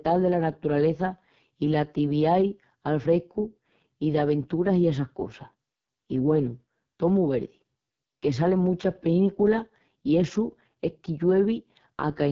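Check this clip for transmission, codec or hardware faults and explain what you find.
The whole recording carries one codec fault: AMR wideband (HD Voice) coding at heavy damage, lasting from start to end. AMR-WB rebuilds speech from a pulse-excited vocal tract model, and the harsh, raspy texture points to its lowest rate, around 6.6 kbit/s, where pulses and filter detail are coarsely quantised. The band above 6.4 kHz is only synthesised noise. On a spectrogram, energy stops at 7.5 kHz and harmonics look smeared and grainy.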